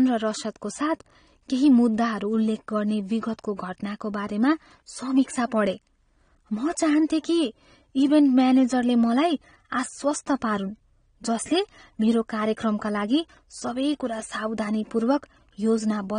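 The speech sounds dull and smeared from start to finish, with a warbling, fizzy texture on sibilants and held sounds, plainly audible throughout. This is likely AAC compression at a low bitrate, consistent with about 32 kbps AAC-LC, lowering the cut-off and leaving spectral holes.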